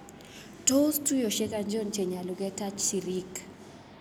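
No technical faults can be heard anywhere here.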